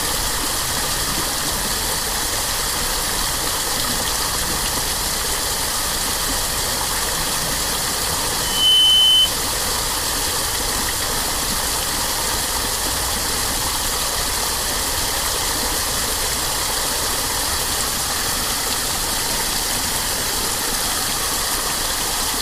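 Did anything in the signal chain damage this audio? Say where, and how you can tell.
Yes. From 8.39 to 9.34 s there is loudspeaker feedback squeal in the acoustic and analogue stage, where a microphone picks up its own loudspeaker. A pure 3 kHz tone swells over roughly a third of a second to about 10 dB above the surrounding sound, then stops. The loop's gain has climbed past unity at that one frequency, so the tone keeps feeding itself. On a spectrogram it is a single bright horizontal line at 3 kHz, and the waveform shows a sinusoidal envelope growing on top of the audio.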